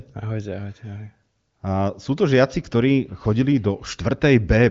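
Speech carried over an AMR wideband (HD Voice) link, content stopping at about 7.5 kHz as that codec's band limit dictates, with no technical faults to report.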